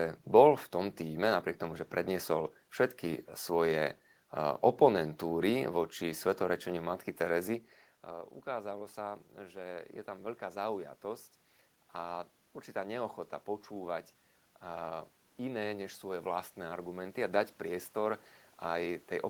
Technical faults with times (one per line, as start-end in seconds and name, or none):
8.06-18.99 automatic gain rising